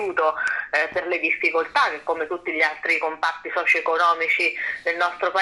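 From start to finish the sound is dull and carries a gurgling, granular texture. The top end keeps flickering in and out. This points to MP2 compression, likely at a low bitrate, which fits a rate near 80 kbps. The coder divides the spectrum into 32 sub-bands and shares out a small bit budget. Upper bands get too few bits and switch off. The remaining bands are quantised coarsely, which produces the grainy distortion.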